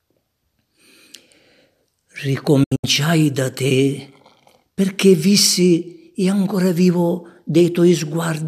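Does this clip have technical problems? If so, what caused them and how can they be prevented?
Yes. A digital broadcast dropout occurs from 2.63 to 2.84 s. The receiver stopped getting usable frames, either because the signal faded or because frames failed their error check, so it muted instead of playing corrupted data. The result is a cluster of short holes, each faded out in about 8 ms, totalling 144 ms of silence spread across 192 ms. The longest gap is 72 ms, and six frames were lost in all. Whatever was transmitted during those holes is gone. Better antenna placement, a stronger received signal, or stronger error protection on the transmission would prevent it.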